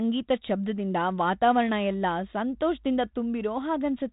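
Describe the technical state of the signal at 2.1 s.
At 2.1 s the speech is intact, with no fault at that moment, only the band limit near 3.8 kHz and the light coding grain of the 32 kbit/s G.726 ADPCM path carrying it.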